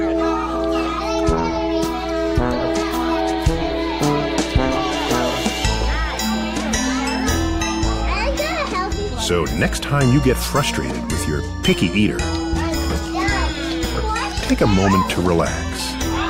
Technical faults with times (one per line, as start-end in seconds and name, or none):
0.00-16.30 mains hum